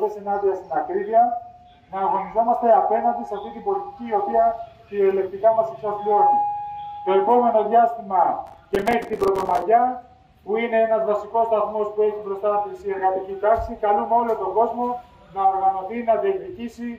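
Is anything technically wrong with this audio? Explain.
Yes. From 8.47 to 9.62 s there is processor overload crackle. The processor falls behind and misses dozens of deadlines on buffers that appear to be only about 3 ms long. Each missed buffer becomes a short hole of silence with abrupt edges, and together they produce a gritty, tearing crackle over the sound. On a waveform this looks like rapid flat dropouts. A spectrogram shows dense vertical broadband streaks until the crackle stops.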